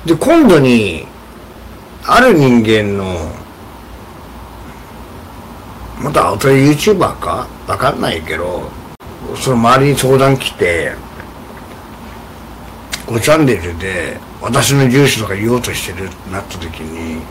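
Hard clipping appears at 0.10–0.81 s, 2.09–2.78 s, 6.16–7.05 s, 9.51–10.76 s, 12.94–13.54 s and 14.55–15.12 s, overdriven by about 9 to 13 dB. Peaks exceed the stage's ceiling and are flattened, adding high harmonics heard as harsh fuzz.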